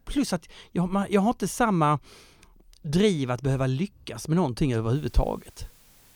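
From 4.95 s to the end, the speech shows low bit depth with dither. Only 8 bits remain, and dither turns rounding error into a steady, even hiss about 35 dB down.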